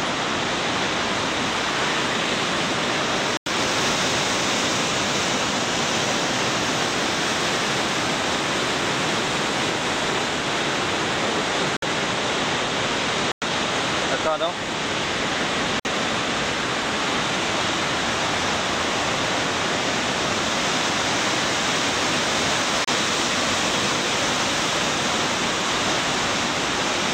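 The sound drops to silence five times, at 3.37 s, 11.77 s, 13.32 s, 15.80 s and 22.84 s. The gaps last 91, 57, 101, 55 and 32 ms. Each dropout is abrupt, and the audio resumes at once with no fade. The likely cause is a Bluetooth stall. Radio interference delays packets, the headphones' buffer empties, and playback halts until the resent data arrives. The result is a brief, hard hole in the sound.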